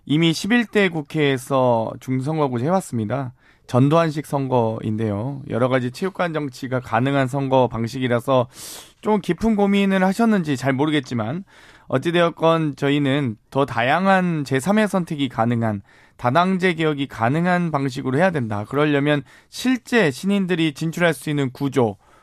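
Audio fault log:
Nothing wrong turns up anywhere in this speech recording, so there's no fault to log.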